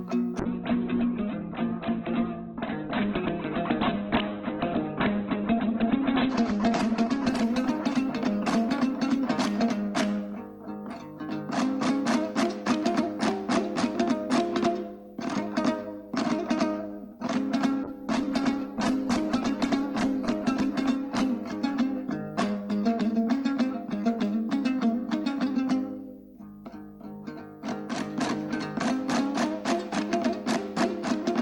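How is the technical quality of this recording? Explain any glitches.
The quality is degraded twice by a call bitrate drop. From 0.41 to 10.87 s and again from 17.84 to 23.07 s, the encoder starved of bits codes coarsely, so the sound turns rough and watery. In the first drop the top is cut to about 4 kHz, which fits a fall toward 8 kbps. The second points to roughly 12 kbps.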